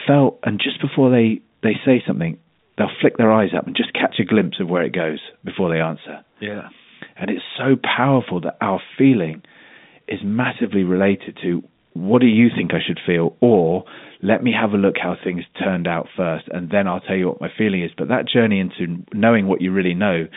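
No faults can be heard anywhere in this recording.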